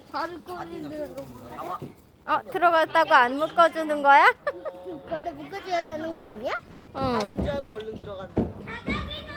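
At 5.15 to 5.26 s and again at 5.79 to 5.94 s, a burst of packet loss occurs: a short run of audio never reached the player in time. The receiver covered each hole by extending the last sound and letting it fade, for 80 ms and then 120 ms, so the sound briefly smears into a dying hiss or buzz before picking up further on, with that stretch of the original gone.

From 6.11 to 6.38 s the audio stops arriving for longer, likely a long network dropout. The last sound is stretched out and thins away over about 240 ms, never reaching true silence, and the sound that returns at 6.38 s has skipped everything that belonged in the gap.

Between 6.55 and 8.06 s, packets go missing over and over, causing repeated packet loss (robotic sound). Five separate holes, the longest 160 ms, are each patched by repeating and fading the preceding sound, about 520 ms in all, roughly a third of the stretch. Because the patches arrive in quick succession, the sound turns choppy, with chunks dropping out throughout.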